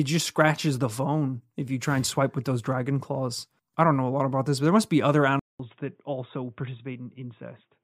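The recording input was likely switched to a poorer device at 5.39 s, just after "there must be other". After a 0.2 s silence, the speech loses everything above 3.8 kHz and turns dull and boxy, comes back a little quieter, and carries a faint new background noise to the end.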